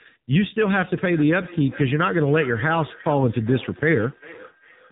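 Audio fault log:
Throughout: AMR narrowband mobile codec. Nothing gets through above about 3.8 kHz, so the speech sounds boxed-in, with a clearly buzzy, synthetic edge from the vocal-tract model being fed too few pulses. That level of damage fits one of the lower AMR-NB modes, around 7.4 kbps.
0.73 to 4.91 s: feedback echo between two devices. A second copy of the speech comes back roughly every 400 ms, at most about 19 dB below the direct sound. Another device in the room is replaying this microphone's signal, and the local echo canceller can't remove playback that isn't its own.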